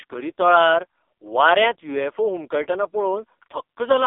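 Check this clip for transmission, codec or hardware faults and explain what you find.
One fault runs through the whole clip: AMR narrowband mobile codec damage. The speech sits in a band of about 300 Hz to 3.6 kHz with nothing above 3.6 kHz, and it has a heavy buzzy, synthetic edge, which fits AMR-NB's low 5.15 kbps mode. The codec rebuilds each 20 ms frame from a vocal-tract model driven by a few pulses, and at so few bits those pulses carry too little detail. A plain telephone-band filter would sound muffled but clean. Here the buzz and artificial texture come from the codec itself.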